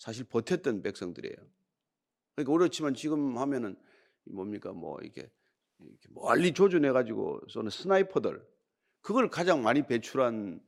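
De-emphasis applied wrongly, from 6.52 to 8.52 s: a treble-cutting filter meant to reverse pre-emphasis acts on this stretch of speech, which either never had any boost or had already been corrected. The response rolls off gradually above the midrange, reaching about 8 dB down at 10 kHz relative to 1 kHz. For those two seconds the speech turns dull and muffled, with softened consonants and missing air, before brightness returns.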